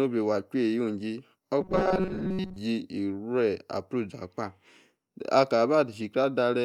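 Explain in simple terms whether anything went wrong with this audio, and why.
Between 1.61 and 2.56 s, new audio likely arrived too late, so the player kept replaying a tiny slice of about 5 ms for most of that stretch. This robotic sound from repeated short buffers turns the speech into a stiff, metallic 188 Hz buzz.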